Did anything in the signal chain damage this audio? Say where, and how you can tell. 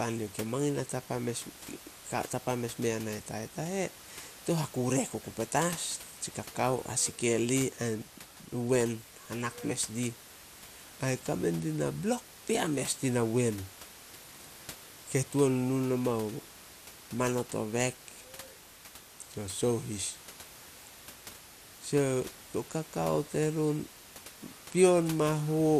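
Yes, at the codec, throughout. The speech sounds dull and gurgling, upper bands flickering out. Likely MP2 compression, which fits about 80 kbps.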